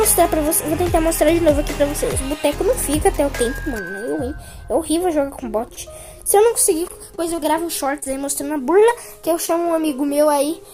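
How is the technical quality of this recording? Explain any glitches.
The recording is marred by network glitches in its second half, all from packets arriving late or not at all.

From 5.59 to 5.92 s and from 6.88 to 7.46 s there is repeated packet loss. Four gaps in each stretch were patched by extending prior sound, producing choppy sound with small pieces missing.

Short concealed packet loss occurs at 8.00–8.04 s, 8.04–8.08 s and 9.46–9.50 s. About 20 ms vanished each time, and the filled hole gives a brief smear or wobble.

At 8.80–8.84 s there is a short stall from a late packet. The buffer emptied, so the last sound was held about 21 ms longer, with nothing lost.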